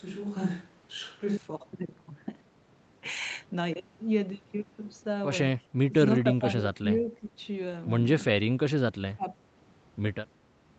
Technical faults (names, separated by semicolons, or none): switch to a distant microphone; speech suppressed in double talk; echo leak